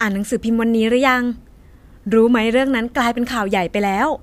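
No technical faults can be heard anywhere here.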